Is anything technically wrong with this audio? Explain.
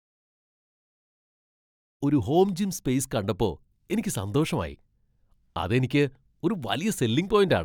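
No, the speech shows no technical faults, and the fade-in that completes at about 2.0 s rises smoothly with no click or hard edge.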